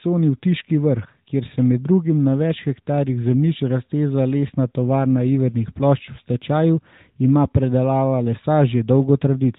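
Nothing goes wrong anywhere in this recording, so there's no technical fault to point out.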